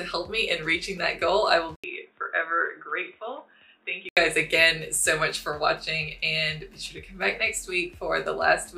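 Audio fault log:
1.76–4.17 s, input switched to a poorer device: an 80 ms gap, then dull, slightly quieter sound with nothing above 3.8 kHz and faint new noise, likely a narrower-band microphone.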